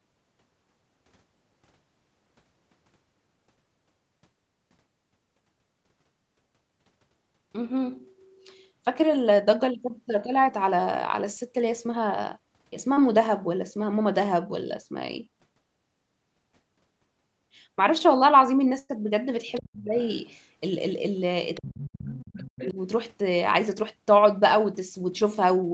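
A speech recording carried over a call, band-limited to 8 kHz by the Opus path, shows four kinds of fault. At 12.93–12.99 s, short concealed packet loss leaves a brief smear where about 32 ms was patched by extending the preceding sound. At 18.79–18.91 s, a burst of packet loss removes about 100 ms: the last sound is held and fades rather than smearing briefly, and the speech resumes further along with a piece missing. A second, fainter voice, likely the other side's voice leaking through from the loudspeaker past the echo canceller, surfaces at 19.49–19.63, 19.99–20.37, 21.54–21.64, 22.06–22.13 and 22.46–22.69 s, roughly 15 to 35 dB below the talker. It is distinct from loss artefacts because new foreign sound appears. Interleaved with these, the talker dips at 19.60–19.99 s (by around 35 dB), 21.64–22.47 s (around 40 dB) and 22.71–22.77 s (around 10 dB). This is likely speech suppressed in double talk, whose dips coincide with the leaking voice rather than with missing packets.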